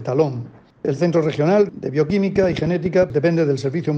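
From 2.10 to 3.04 s a train of clicks rides over the sound: about ten similar pulses at roughly 9.7 per second, unevenly spaced, peaking around 5 dB above the signal. It sounds like erratic ticking, likely from electrical interference or a faulty connection or power supply.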